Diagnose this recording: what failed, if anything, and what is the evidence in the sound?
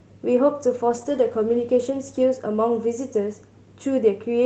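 You've got a call bitrate drop at the network and codec stage: from 0.91 s to 2.31 s the speech goes rougher and more watery. The bandwidth estimate sagged, so Opus got squeezed from 32 to 15 kbps for about 1.3 s and coded everything more coarsely.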